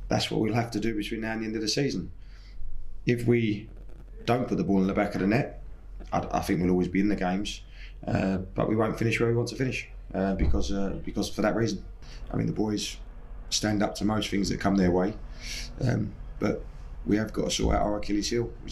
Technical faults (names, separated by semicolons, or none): none